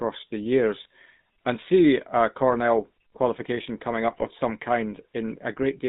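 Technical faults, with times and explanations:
throughout, GSM full-rate codec: The speech has a buzzy, gravelly roughness, and its band is confined to roughly 150 Hz to 3.7 kHz, with nothing above. The damage is plainly audible. The codec rebuilds the voice from a vocal-tract filter driven by a coarse, regularly spaced pulse excitation that keeps only a fraction of the original detail. That thinned-out excitation gives the grainy buzz, and the sound fits the 13 kbps full-rate codec.
0.82–0.86 s, 2.51–2.57 s and 4.12–4.27 s, GSM bit errors: The speech briefly breaks into squawks, pops and a gargling smear. The first burst comes just before "and see a", the second right after "and see a" and before "qualification coming", and the longest, at 4.12 s, right after "qualification coming". Corrupted bits reached the decoder, so the filter, pitch or gain values for a few consecutive frames were wrong, bending the spectrum and throwing the level off. 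This points to a weak radio link.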